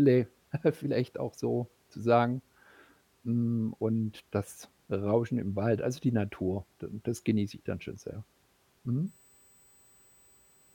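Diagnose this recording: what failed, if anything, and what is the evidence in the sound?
USB whine sneaks in at 9.07 s and runs to the end at 10.75 s: a steady fixed-pitch tone at 8 kHz, loudest at its 16 kHz harmonic, roughly 35 dB under the speech. That's the analogue side picking up the bus's 125 microsecond microframe current draw through power or ground.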